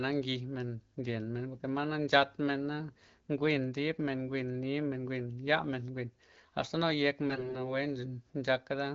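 From 7.28 to 7.69 s, AMR bit errors flip roughly a fifth of the weakly protected bits, misplacing excitation pulses, so the speech turns hoarse, scratchy and gargly.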